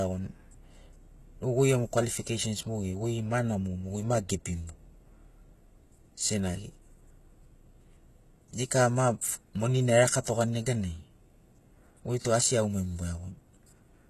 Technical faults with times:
0.00-14.10 HE-AAC compression
10.24 pre-echo

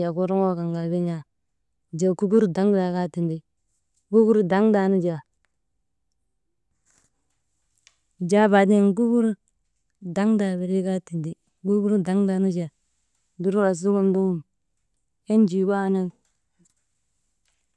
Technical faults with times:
none

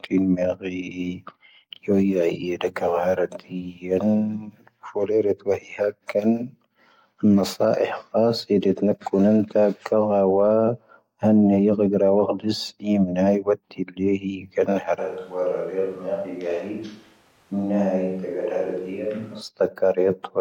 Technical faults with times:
14.98-19.41 switch to a distant microphone

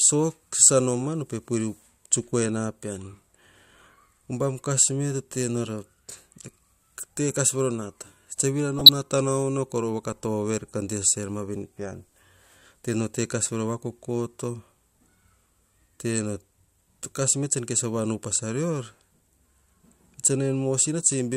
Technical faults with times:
1.03-1.06 DAB burbling
8.79-8.89 DAB burbling

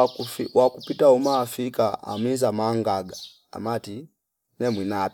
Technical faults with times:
none

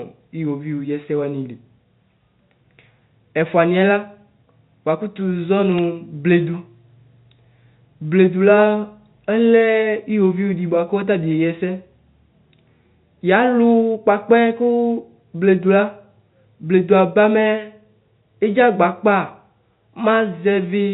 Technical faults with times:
5.78 bit errors on a digital phone line

